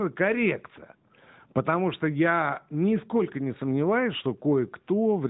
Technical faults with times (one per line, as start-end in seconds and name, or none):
none